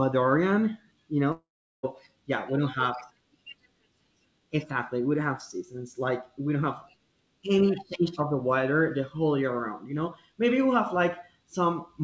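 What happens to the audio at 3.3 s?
Nothing goes wrong at 3.3 s: the speech passes through intact, carrying only the ordinary band limit of a G.722 call path with nothing above 8 kHz.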